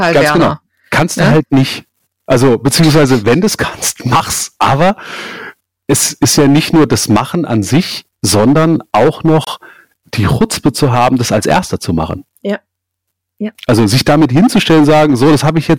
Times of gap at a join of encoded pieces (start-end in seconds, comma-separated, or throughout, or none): 9.45-9.47